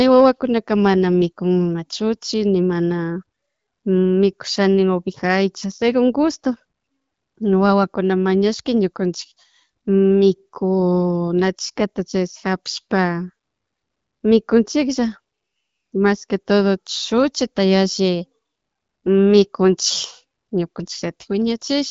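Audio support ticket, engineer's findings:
No faults found: speech on the AMR wideband (HD Voice) path sits at the clear quality and light coding texture expected around 12.65 kbit/s, with the band topping out near 7 kHz as that codec's noise-filled upper band does.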